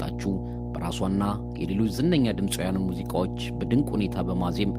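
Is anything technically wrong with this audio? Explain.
Yes. Mains hum runs through the whole clip. A ground loop or a nearby transformer is coupling the 60 Hz power line into the signal path, so the electrical supply becomes part of the recording. It comes through as a steady low drone at 60 Hz with some low harmonics above it, sitting only a few decibels below the speech. At that level it is loud enough to muddy the low end and stays audible even while the speaker is talking.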